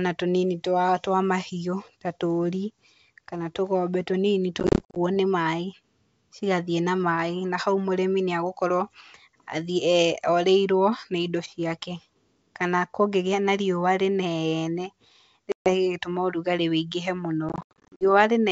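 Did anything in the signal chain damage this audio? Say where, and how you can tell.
Yes, at the network stage: packet loss on an ADPCM call leaves hard-edged silent gaps at 4.60–4.98 s (scattered, longest 50 ms), 15.52–15.75 s and 17.49–18.04 s (longest 80 ms). Each gap ends with slightly distorted speech that settles within tens of milliseconds, because the G.722 decoder's predictor has fallen out of step with the sender's. A plain buffer dropout would resume cleanly.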